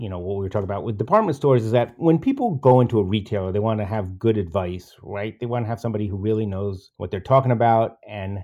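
Nothing in this recording of speech stood out as a technical problem on listening.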